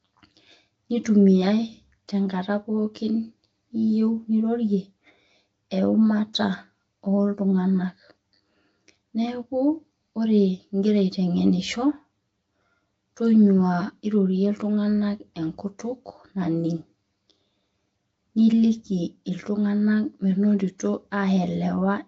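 From start to end, one copy of the signal runs late by roughly 10 ms before being summed to mono, producing channel delay (comb filtering). Cancellations start near 50 Hz and repeat about every 100 Hz, giving the speech a hollow, phasey colouring with fixed notches.

Also throughout, the speech carries plainly audible codec damage, likely from Nellymoser compression at a rate that fits a 32 kbps stream. Starved bands are filled with noise, leaving a rough, hissy halo and a smeared, underwater quality, with nothing above 7.7 kHz.

At 6.33 s there is pre-echo. The codec's quantisation noise, sized for a sharp attack late in its block, spills about 11 ms ahead of it, so a brief hiss leads the onset and the attack itself sounds softened and smeared.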